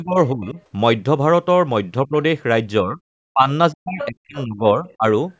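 From 0.02 to 0.57 s the speech dips by up to about 20 dB. This is speech suppressed in double talk, likely an echo canceller turning down both talkers at once. A faint scrap of the other side's voice leaks through at 0.46–0.52 s, about 30 dB below the speech. Shorter suppression dips follow at 2.07–2.13 s, 2.83–3.00 s and 3.33–3.49 s. The longest runs from 3.72 to 5.05 s. It drops the speech by up to about 40 dB. During it, the other side's voice leaks through again at 4.01–4.07 s, strongly, and at 4.37–4.42 s, faintly.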